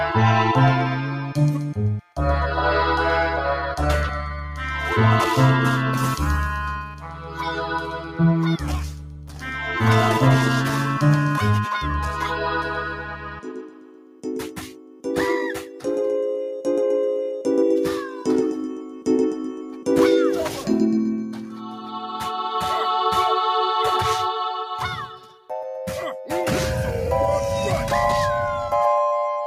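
A noise suppressor built for speech was left running on this non-speech material, so it treats steady tones, ambience and decaying tails as noise to be removed. That is the noise suppressor applied to music or sounds, and across the whole clip its gain moves through a swing of roughly 10 dB. The result is a level that breathes and pumps: sudden onsets get through largely intact, while anything sustained sinks and thins behind them.

At particular moments the suppressor judged the sound itself to be noise and pulled it down harder than the rest: sound cut by the noise suppressor. This happens at 1.02–2.19 s, 4.43–4.6 s, 6.76–9.5 s, 12.1–15.85 s, 18.05–21.93 s and 25.07–25.5 s. The deepest drops reach about 10 dB in every stretch except 4.43–4.6 s, which dips only about 4 dB. Within each window the cut comes and goes rather than holding, so held sound sags and decays end early, with the longest spells around 12.1–15.85 s.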